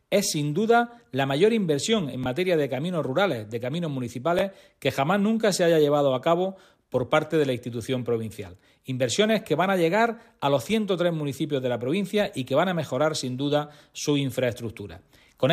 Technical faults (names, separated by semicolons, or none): Bluetooth stutter